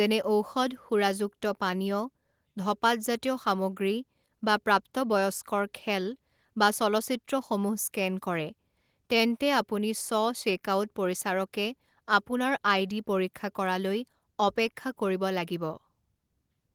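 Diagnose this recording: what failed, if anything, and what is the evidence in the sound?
Nothing failed here; the speech runs its full length with no dropouts, clicks, distortion or level jumps that would point to a fault at any stage of the chain.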